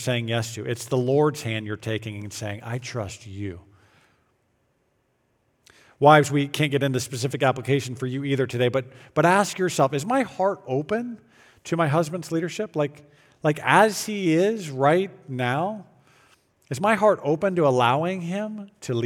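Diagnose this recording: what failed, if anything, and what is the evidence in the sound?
Nothing failed: the recording carries no audible evidence of a fault at any stage.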